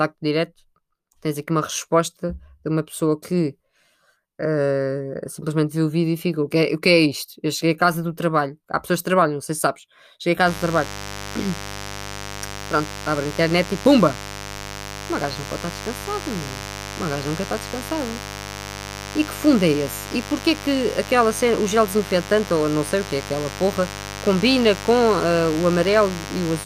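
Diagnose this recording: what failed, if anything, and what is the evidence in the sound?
Mains buzz from 10.44 s to the end of the recording, a steady, raspy buzz sitting about 15 dB below the speech. This is an analogue wiring fault: a dimmer, rectifier or broken shield is coupling sharp switching spikes from the 50 Hz supply into the signal path, twice per mains cycle. Those narrow pulses carry a dense series of 50 Hz harmonics reaching up into several kHz, which gives the buzz its rough edge.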